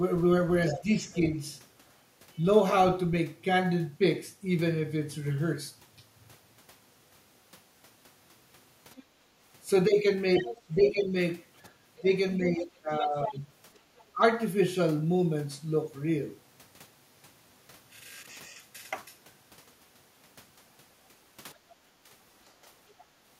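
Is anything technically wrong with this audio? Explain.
Yes, the speech carries several echo-canceller faults.

Other side's voice leaking through, at 0.71 to 1.14 s, 8.96 to 9.03 s, 10.35 to 11.01 s, 11.97 to 14.04 s and 22.99 to 23.04 s. A second, fainter voice sits under the main talker. It is roughly 10 dB down in the first and longest stretches, lower near 10.4 s, and barely audible at 9.0 s and 23.0 s. This is likely loudspeaker playback reaching the microphone that the canceller failed to subtract fully.

Speech suppressed in double talk, at 0.73 to 1.38 s and 10.47 to 14.21 s. In both spans the main voice sags while the second voice is present. Near 1 s the dip is slight, a few decibels. In the later span it goes much deeper, around 15 dB, and the lowered passages add up to roughly a second and a half. This likely comes from the canceller treating simultaneous talk as echo and attenuating everything.

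Background gated by the echo canceller, at 9.2 to 9.31 s, just after the brief leak near 9.0 s. The room tone drops by about 16 dB for roughly a tenth of a second, then comes back. The canceller clamped the microphone hard while it judged the loudspeaker active. The ambience briefly vanishes, leaving a short hole in the background.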